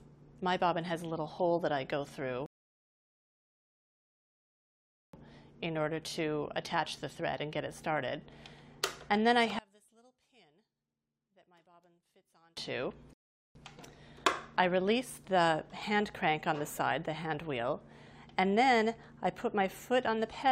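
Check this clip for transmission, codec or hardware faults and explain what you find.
Two kinds of fault turn up here: a pair of rebuffering stalls and a stretch where the sound nearly drops out, most likely from one channel inverted.

The first rebuffering stall runs from 2.46 to 5.14 s, and a second, shorter one from 13.13 to 13.55 s. In each, the player has used up its downloaded audio and simply waits for more. The sound cuts to silence and then picks up exactly where it left off, so nothing goes missing, but the clip gets longer: about 2.67 s from the first stall and 0.42 s from the second.

From 9.59 to 12.57 s the level falls by about 32 dB, leaving only a faint trace of the audio before it snaps back to full strength. The likely cause is one channel inverted, meaning one side of the stereo pair has flipped polarity. When the two sides are summed to mono, everything they share cancels out, and only the small difference between them survives. 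That leftover is what you hear as that faint remnant.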